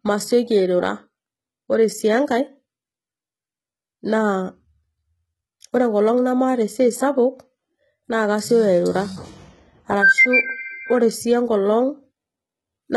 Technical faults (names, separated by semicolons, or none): HE-AAC compression